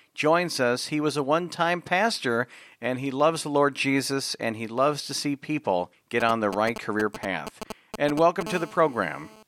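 From 6.20 to 8.43 s, right after "to see people get", GSM signalling bursts come in: a galloping dit-dit-dit of short 217 Hz buzzes, nearly as loud as the speech, from a nearby 2G phone's radio pulses being rectified. Then, from 8.47 to 9.43 s, it settles into steady GSM phone buzz, a raspy 217 Hz tone full of harmonics at about 17 dB below the speech, which is what the phone's continuous burst pattern during a call produces.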